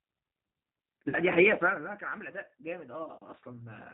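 G.729 codec damage runs through this whole speech clip: at 8 kbit/s the voice is rebuilt from a filter, pitch predictor and sparse pulses, so it sounds rough, synthetic and capped at 4 kHz. VoIP packet loss concealed by the speech codec appears from 1.09 to 1.18 s, where about 40 ms went missing, which fits two 20 ms packets; the decoder extends its last pitch and filter into a fading buzzy tone or coloured noise, and the voice stays weakened briefly afterwards.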